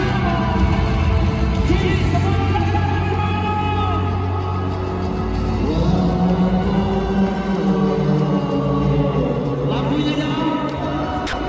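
Near the very end, from 11.27 to 11.33 s, the sound drops out for 60 ms. A short stretch of steady, featureless noise fills the gap. The audio then returns. This is most likely sound dropped by the voice detector. The sending side judged that moment to be background and stopped transmitting, and the receiver inserted comfort noise instead. The clip came over a call link with nothing above 8 kHz, which fits the G.722 codec.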